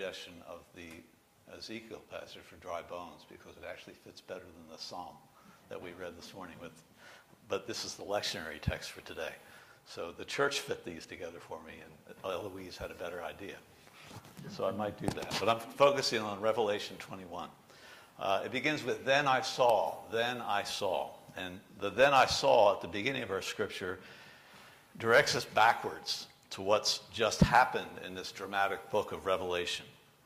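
Nothing is technically wrong with this clip; no faults can be heard at any point.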